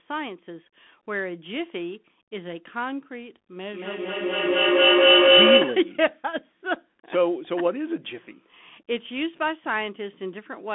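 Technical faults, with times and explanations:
Throughout, Bluetooth CVSD headset codec. The speech is squeezed into a narrow telephone band, roughly 200 Hz to 3.5 kHz, and nothing passes above 3.8 kHz. The damage is plainly audible. This codec sends one bit per sample, only up or down, with a step size that adapts. Loud, bright sounds outrun that step and distort. S sounds turn scratchy, and a grainy hiss sits under the speech. The sound fits a 64 kbps link.
3.64 to 6.04 s, feedback echo between two devices. Here the speech comes back on itself, about every 200 ms. Two devices in one room share the call. One plays what the other's microphone sent, and that microphone hears it again. Each device's echo canceller removes only its own playback, so the loop survives. The repeats pile up rather than fade, reaching about 10 dB above the speech. Each pass sounds thinner and more ringing.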